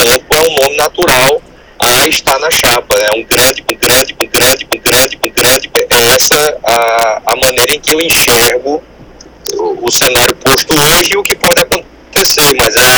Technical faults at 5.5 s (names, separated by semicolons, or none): integer overflow; broken-record loop